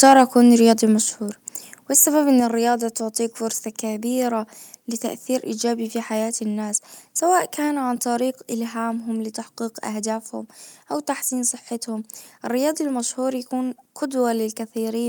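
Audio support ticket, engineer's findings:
Microphone overload, 0.00–0.22 s. Harsh, crackly edge on the opening syllables, peaks squared off. Signal driven about 3 dB past full scale, a few percent of samples flattened. Likely cause: mic input gain too high, converter out of headroom.

Microphone volume stepped down, 1.02 s. Sudden level drop of about 5 dB, voice and background falling together, shortly after the clipped opening. Likely cause: call software's automatic gain control cutting device input volume in one step after detecting overload.

Microphone volume stepped down again, 2.4 s. A further abrupt drop of about 4 dB, again on everything at once. Likely cause: the same gain control taking a second correction, so the level reaches its final value in two steps.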